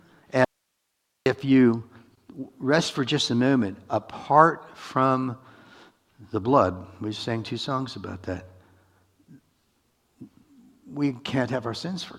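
The audio has an audio dropout to a faint residue from 0.45 to 1.26 s. For about 815 ms the sound cuts out abruptly. Only hiss remains, roughly 55 dB below the signal. The likely cause is a brief loss of the source while the path after the break stayed live.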